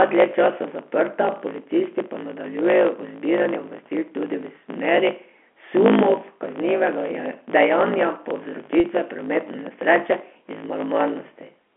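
From start to finish the speech carries a block size mismatch (truncated). One stage writes longer blocks than the next reads, which fits 1024-sample blocks, and each block's tail is discarded. The result is a 54.4 Hz buzz and speech running 1.16 times fast at near-normal pitch. A spectrogram shows evenly spaced vertical seams at that rate, and the waveform shows abrupt joins.

From 8.80 to 8.84 s comes packet loss with pitch repetition. About 40 ms went missing, which fits two lost packets, and the receiver filled the gap by repeating the last pitch period. It sounds like a briefly held, buzzy note. On a spectrogram, frozen harmonic stripes bridge the gap inside the 250 Hz to 3.4 kHz telephone band.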